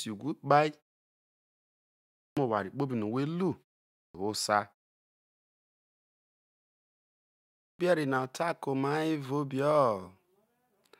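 Clipped start after a pause at 2.24 s, before "oware kpobi no̱", at 4.01 s, and at 7.67 s, before "na tai ke̱ oma". The output wakes late from silence and cuts 123 to 135 ms from each onset, so speech starts abruptly.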